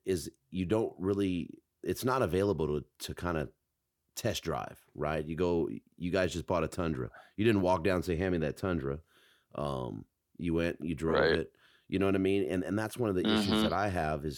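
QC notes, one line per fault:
No faults heard.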